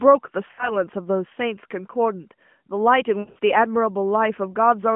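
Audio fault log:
0.52–0.74 s, lost AMR speech frames: about 60 ms, fitting three 20 ms frames, is bridged by the decoder repeating the last pitch and vocal tract settings at falling gain. This gives a smeared warble rather than a hard silent gap.
3.20–3.38 s, lost AMR speech frames: losses totalling about 140 ms are scattered across 160 ms, with the longest run 80 ms. The sound stretches, fades, then returns rough, unlike a clean dropout.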